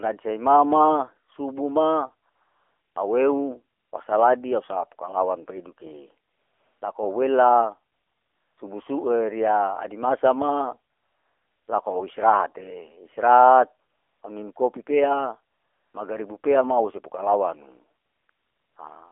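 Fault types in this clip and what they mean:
AMR narrowband mobile codec: The speech went through the 2G/3G phone codec at a low bitrate, consistent with 7.4 kbps. Only 300 Hz to 3.5 kHz survives, and the vocal-tract model with sparse pulses leaves the voice plainly buzzy and synthetic throughout.
AMR comfort noise: The phone judged the talker silent and stopped sending speech frames. The receiver then filled each gap with smooth, steady synthetic noise. Ten such patches switch in and out between 2.30 and 18.76 s, lasting from 20 ms to 740 ms.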